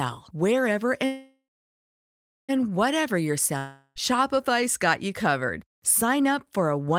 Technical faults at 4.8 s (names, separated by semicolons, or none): none